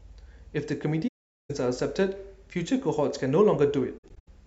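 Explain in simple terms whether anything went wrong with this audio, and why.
AAC frame loss with muting, from 1.07 to 1.50 s and in scattered gaps from 3.97 to 4.28 s: missing chunks of the speech were replaced with silence that fades softly in and out.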